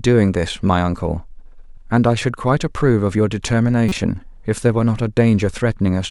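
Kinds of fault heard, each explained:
Corrupt frame decoded: a compressed frame reached the decoder with flipped bits, and it was played out rather than concealed, so misread gains and codes put energy at frequencies that do not belong to the speech. Here it is a single damaged frame, heard as a short glitch of about 36 ms from 3.89 to 3.92 s, peaking loud at around -5 dBFS.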